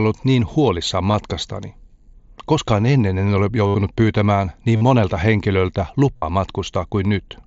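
Concealed Bluetooth headset packet loss occurs at 1.11–1.14 s, 3.67–3.75 s, 4.76–4.81 s and 6.16–6.22 s. Lost headset packets were filled by repeating recent waveform, so the longer gaps (about 50–75 ms) buzz at steady level before a brief warble.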